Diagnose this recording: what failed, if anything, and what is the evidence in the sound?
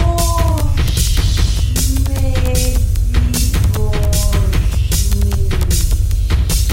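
The failure is in the analogue wiring: video or display buzz. From 1.10 s to the end of the clip, a steady buzz at 75 Hz sits under the sound, with a gritty hash riding above it. It is about 25 dB below the signal. A monitor or video cable is coupling into the audio path. The buzz follows the display's 75 Hz refresh, and its sharp scanning edges produce the hash.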